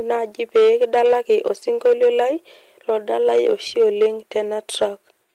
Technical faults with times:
0.00-5.35 hard clipping
1.05 lost packet rebuilt from error correction

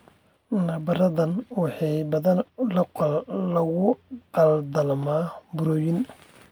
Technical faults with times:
none

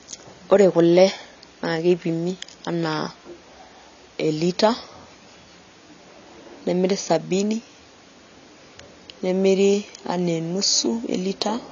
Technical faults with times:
0.00-11.72 AAC compression

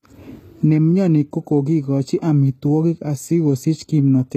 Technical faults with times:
0.00-4.36 HE-AAC compression

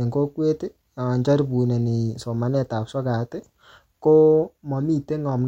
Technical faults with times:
none

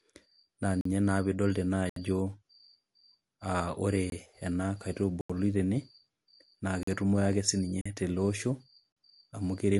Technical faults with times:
0.00-9.79 MP3 compression
0.81-0.85 block of digital silence
1.89-1.96 block of digital silence
4.10-4.12 block of digital silence
5.21-5.30 block of digital silence
6.83-6.87 block of digital silence
7.81-7.86 block of digital silence
8.92-8.96 block of digital silence

